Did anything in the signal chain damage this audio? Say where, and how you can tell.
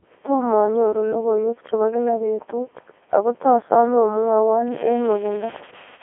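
Yes, the audio was damaged at two points in the chain.

At the codec stage, the whole clip passed through the Codec 2 vocoder. The speech sounds robotic and buzzy because the decoder rebuilds it from sine waves driven only by pitch, voicing, energy and a coarse envelope. The original waveform is not kept. The damage is heavy and fits Codec 2's top 3.2 kbit/s mode. On a spectrogram, energy sits in a telephone band of about 300 Hz to 3.4 kHz, with nothing above 3.6 kHz.

At the converter or its digital interface, an unreliable data bit appears from 4.68 s to the end at 6.03 s. A marginal data line flips one bit in a random share of samples, so each error adds a spike of identical size. The result is a steady crackle or fizz that carries on through pauses too. The waveform shows equal-height spikes scattered through that stretch, and the spectrogram shows a broadband speckle that does not follow the speech.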